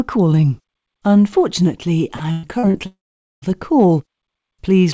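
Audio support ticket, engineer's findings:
Repeated packet loss (robotic sound), 2.16–2.77 s. Four gaps, longest 116 ms, about 240 ms missing; concealment fills roughly a third of the span by extending the last sound. Result: choppy stretch with pieces of the audio dropped. Suspect network path or jitter buffer starvation.

Long network dropout, 2.86–3.45 s. Likely cause: a sustained network outage, with about 560 ms of audio never delivered. The sound smears into a short fading buzz or hiss, then goes silent for about 460 ms before resuming past the lost section. Band-limited to 8 kHz, consistent with the G.722 call path.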